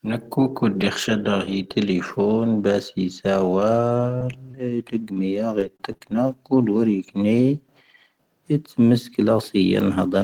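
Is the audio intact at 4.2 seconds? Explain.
No. From 4.18 to 4.21 s there is a short concealed packet loss: about 20 ms of the call arrived too late for the decoder, so the receiver extended the preceding sound to cover it and blended back. That gives a brief smear or wobble rather than a silent gap. Overlapping its end, at 4.20 s, and again at 4.28 s, there is a lost packet rebuilt from error correction: a 10 ms stretch played from a low-bitrate copy carried in the following packet. It sounds rougher and noisier, unlike the smoother, extrapolated smear of concealment.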